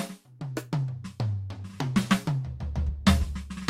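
No technical fault can be heard anywhere in this music recording: the signal holds steady throughout, with no breaks, distortion or interruptions in its path.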